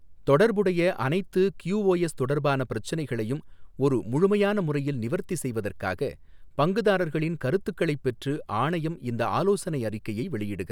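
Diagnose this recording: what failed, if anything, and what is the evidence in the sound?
Nothing in the recording points to a failure at any stage of the chain. No audible event in the speech calls for a diagnosis.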